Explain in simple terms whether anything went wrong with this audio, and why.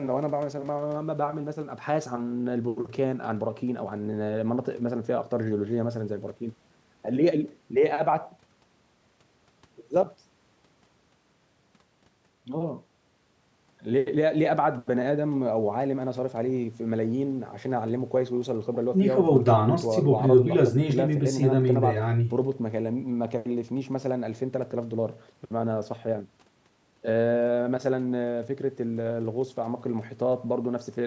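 Nothing went wrong here; the speech simply passed through the usual microphone processing of a call, which trims away the deepest bass and leaves nothing above about 8 kHz, and that is normal.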